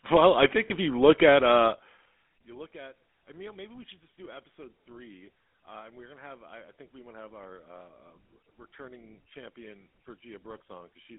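A speech recording carried over a GSM full-rate codec from start to finish, with plainly audible codec damage: a buzzy, gravelly roughness on every voiced sound, consistent with the 13 kbps GSM full-rate coder. The codec models the vocal tract and excites it with a sparse, regularly spaced pulse train, so the fine detail of the voice is rebuilt rather than kept. A spectrogram would show energy confined to roughly 200 Hz to 3.5 kHz, blank above and below, with harmonics looking smeared and grainy. Lost GSM frames occur twice. The first runs from 0.68 to 0.71 s, between "well I think" and "if you look at", and the second from 8.08 to 8.11 s, just before "returning champion". Each gap is short enough to fit a single lost 20 ms frame. The decoder repeats the last good frame's settings, so instead of a gap there is a brief metallic ring. On a spectrogram this shows as a thin vertical slice of frozen spectrum. 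The waveform shows a short stretch of repetitive cycles rather than silence.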